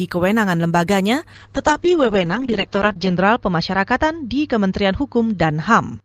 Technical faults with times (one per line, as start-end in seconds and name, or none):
1.34-6.05 call bitrate drop